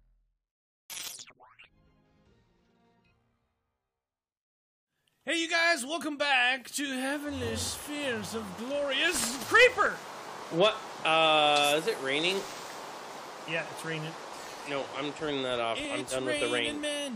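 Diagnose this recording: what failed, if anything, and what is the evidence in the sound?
Overlap between stream segments at the streaming/playback stage: tiny skips at 9.86–9.88 s and 15.85 s, where overlapping segment timestamps made the player trim real audio, spaced as 6 s segments would be.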